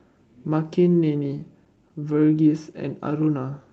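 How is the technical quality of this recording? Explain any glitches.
The speech has two timing glitches, both from the jitter buffer of a call path whose audio stops at about 8 kHz.

From 1.39 to 2.41 s there are repeated stalls (stutter): eight brief gaps, none longer than 14 ms, where packets arrived late and the receiver stretched the last sound to fill about 92 ms. Nothing is lost, which separates it from packet loss. The audio just hitches and drags.

From 3.39 s to the end at 3.72 s comes a jitter buffer slow-down. The buffer rebuilt its reserve by repeating pitch periods, adding 52 ms and running at 88% speed. Unlike the stutter, the pitch stays put and the sound stretches smoothly instead of breaking.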